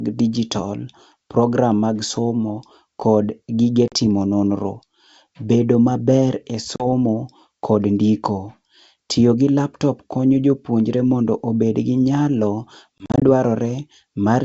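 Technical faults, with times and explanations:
3.88–3.94 s, packet loss on an ADPCM call: a hard 40 ms silent hole, about two packets. The return is slightly distorted as the decoder's predictor resyncs, unlike a clean dropout.
6.76–6.87 s, packet loss on an ADPCM call: another 40 ms gap, again about two packets. The mistracked step size leaves a short distorted restart that settles within tens of milliseconds.
12.98–13.23 s, packet loss on an ADPCM call: 120 ms lost in several short holes scattered over 240 ms, none longer than 40 ms. Each restart returns slightly distorted against the clear G.722 wideband sound, giving a stuttering, choppy patch rather than one long gap.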